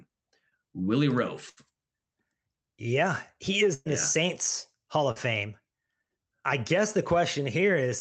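At 0.49 s there's a short concealed packet loss: about 20 ms never arrived, and the receiver patched it by extending the last sound, leaving a brief smear. Bursts of packet loss hit at 1.49–1.73 s and 3.74–3.87 s, losing about 80 ms and 120 ms. Each gap gets filled with a fading continuation before the speech picks up further on. Another short concealed loss at 5.11–5.18 s smears about 40 ms.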